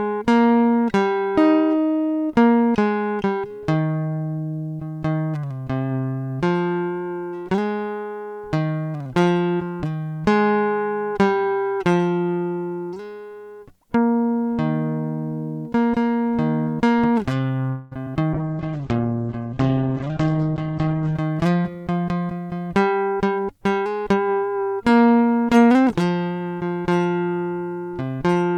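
At 17.69 s the music stalls into a fading continuation of the last sound for about 0.24 s, then carries on from where it stopped, with nothing skipped. That's a call audio freeze, likely packets held up in transit so the jitter buffer ran dry and the receiver stretched the tail until audio arrived.

Right after, at 18.05 s and 18.14 s, there are two quick smears. These are short concealed packet losses: roughly 20 ms of audio never made it to the decoder each time, and the receiver papered over the hole by extending the previous sound before blending back in.

From 18.35 s to 21.21 s the music goes rough and muffled. That's a call bitrate drop, from 128 kbps down to 9 kbps. The encoder was told to spend far fewer bits, so everything gets coded coarsely and the top end is cut from 20 kHz to about 8 kHz.

Inside that stretch, from 19.79 s to 20.95 s, the tempo hurries to about 117% while pitch stays put. 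That's a jitter buffer speed-up. Having banked extra audio after the stall, the receiver snipped out small pitch-period chunks, about a fifth of a second in total, to work the delay back down.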